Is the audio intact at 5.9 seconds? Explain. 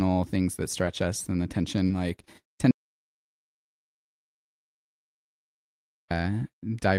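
No. At 5.9 seconds the speech is in complete silence, with not even room tone, inside an audio dropout to silence that runs from 2.71 to 6.11 s, right after "like tend". About 3.4 seconds of speech are simply missing before the sound resumes mid-flow. The likely cause is a lost input, such as a disconnected device, a failed link or a stray mute, while the recorder kept writing silence in its place.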